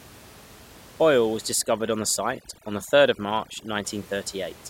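From 1.53 to 3.85 s, overdone noise removal mutes bands near the estimated noise floor, leaving twinkling specks rather than a gate's clean on-off cuts, while the room noise sits about 24 dB down elsewhere.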